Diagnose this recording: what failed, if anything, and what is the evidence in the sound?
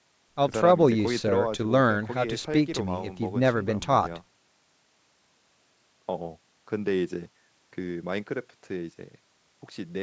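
Nothing failed: the speech shows only the expected signature of call microphone processing, with the lowest bass trimmed by its high-pass filter and no content above 8 kHz.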